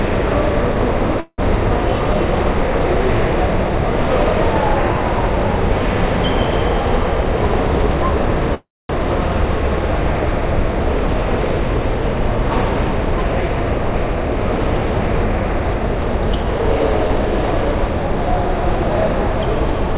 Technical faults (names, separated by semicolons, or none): call audio freeze; jitter buffer speed-up; skip ahead